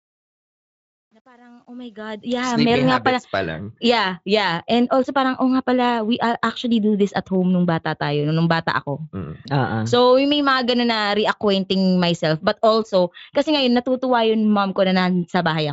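From the start to 2.55 s the speech fades in, and the quiet opening carries truncation distortion on a fade. The gain stage drops low-order bits without dither, which fits roughly a 10-bit stage, so the low-level waveform collapses into a few coarse steps. From 0.0 to 1.84 s the sound is gritty. A noise gate would instead open and close cleanly. Here the grit follows the level and clears as the fade reaches full level at 2.55 s, with the band limited to about 7.6 kHz.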